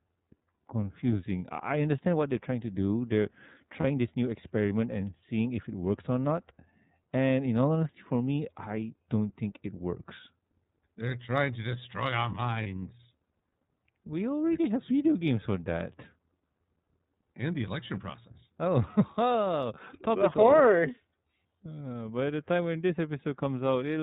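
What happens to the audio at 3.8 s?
A brief held, slightly buzzy vowel-like sound fills 3.80 to 3.85 s. This is a lost iLBC frame: one 30 ms packet went missing, and the decoder repeated the last pitch cycle mixed with noise. Speech snaps back almost immediately because each iLBC frame is decoded independently. Around it, the audio has the rough, somewhat synthetic, band-limited character of the iLBC codec: narrowband, nothing above 4 kHz, at 13.33 kbps with 30 ms frames.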